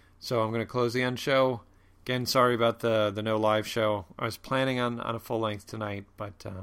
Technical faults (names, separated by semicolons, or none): none